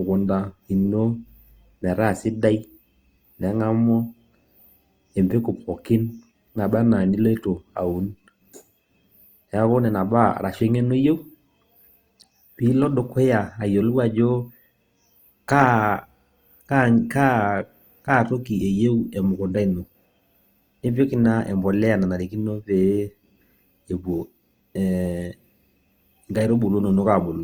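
A speech recording that carries Opus compression damage from start to finish, plainly audible across the whole clip. Voiced sounds come out rough and grainy, with a noisy texture where the tone should be clean, while the band stays full, reaching up to about 20.2 kHz. That pattern is likely the codec's music mode at a low rate near 24 kbps, refilling starved bands with folded or noise-like content.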